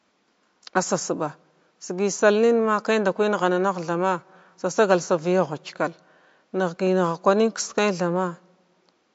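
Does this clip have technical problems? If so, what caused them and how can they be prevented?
Yes. Throughout the speech, MP3 compression at a low bitrate, likely around 48 kbps, starved the encoder of bits, so it trimmed the treble and dropped weak frequency lines frame by frame. This leaves plainly audible watery, swirly texture, metallic chirps on s sounds and smeared attacks. The room noise sits about 47 dB below the speech. To prevent this, store the recording losslessly or encode it at a much higher bitrate.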